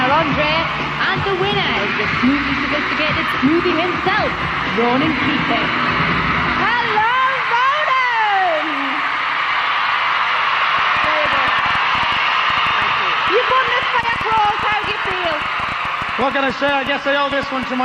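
From 10.79 s to 17.64 s a ticking, popping layer sits over the sound, roughly seventy sharp clicks of much the same shape arriving at about 8.9 per second but at an uneven pace, and reaching about the level of the sound itself, so they stand out in quieter moments too. This train of clicks is likely interference from nearby equipment or a faulty connection or power supply repeatedly injecting short pulses into the signal.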